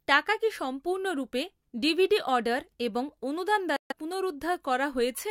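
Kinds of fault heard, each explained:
Bluetooth dropout: The speech cuts to silence just after "ডিভিডি অর্ডার এবং অনুদান", at 3.76 s, and returns at 3.93 s. The hole lasts about 0.16 s. When the sound comes back, it has moved on, as though it kept playing through the gap. This is likely a wireless link failing to deliver a short run of audio packets in time. The missing stretch fits a handful of lost packets.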